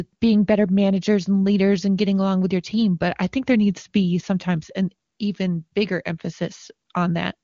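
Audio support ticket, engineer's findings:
No faults found on listening.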